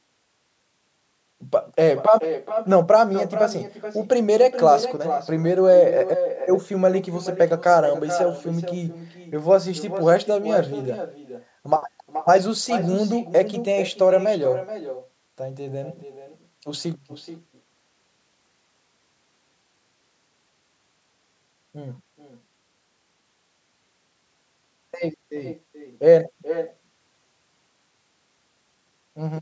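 Speech runs through a call path with an echo with no canceller throughout. Every phrase returns roughly 0.4 s later, about 12 dB quieter and thinner. That fixed delay and distinctness separate it from room reverberation, which smears continuously. The call microphone processing, capped near 8 kHz, trims the lowest bass normally.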